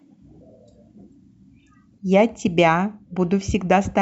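From the start to 2.0 s the speech carries pre-emphasis left on. A treble boost following the FM 50 µs curve was applied and the matching de-emphasis never undid it, leaving 10 kHz about 11 dB hotter relative to 1 kHz. The result is thin, glassy and hissy, with sibilants that spit. On a spectrogram the upper bands glow brighter than usual across those two seconds. The waveform shows spikier, fizzier detail on fricatives.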